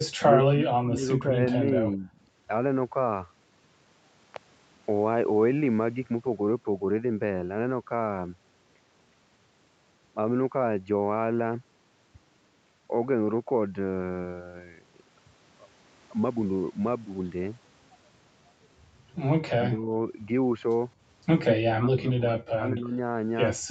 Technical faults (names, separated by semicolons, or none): speech suppressed in double talk